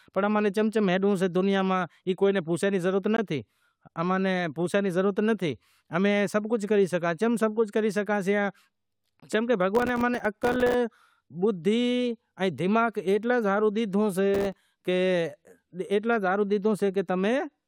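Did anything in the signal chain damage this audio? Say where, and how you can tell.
Yes, in two places in the chain.

The first is a gap between stream segments, at the playback or streaming stage. A hard-edged silence of about 18 ms sits at 3.17 s, and another of about 24 ms runs from 9.20 to 9.22 s, six seconds later. That spacing fits six-second segments whose timestamps leave a small gap at each join. The player fills the gap with silence, so the speech is interrupted but nothing is lost.

The second is processor overload crackle, at the driver or buffer stage. From 9.75 to 10.74 s, and again from 14.34 to 14.61 s, a gritty crackle rides on the speech. It is built from many tiny hard-edged dropouts in a row, each a few milliseconds long, which fits a small buffer that the processor kept failing to fill on time. Each missed buffer came out as silence, and the crackle stops once the load clears.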